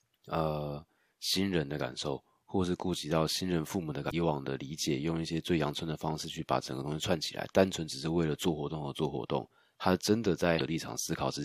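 Speech, marred twice by damaged data in a compressed stream: brief bursts at 4.09 to 4.13 s and 10.57 to 10.61 s, each about 40 ms. At those points corrupted bytes break the decoder's frame sync, so it misreads the stream and puts out a short chirp, squawk, click or hole.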